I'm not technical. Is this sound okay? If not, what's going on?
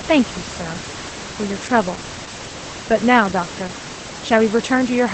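No. Opus voice compression runs throughout the speech. To save data, the squeezed voice signal drops everything above about 8.6 kHz and is rebuilt only roughly, so the voice sounds noticeably muffled, slightly hoarse and a little robotic. The quiet room noise underneath is just the room.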